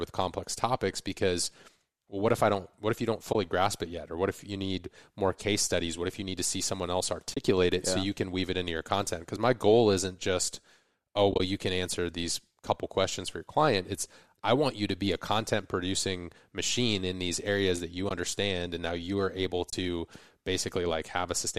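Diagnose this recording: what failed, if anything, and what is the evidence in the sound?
Brief soft-edged dropouts at 3.33 s after "if you don't", 7.34 s after "to see someone else", 11.32 to 11.40 s, 18.09 s after "these areas that you", and 19.70 s. This is AAC frame loss with muting in the codec stage: lost 10 ms frames are zeroed and the overlapping windows fade them out and back in.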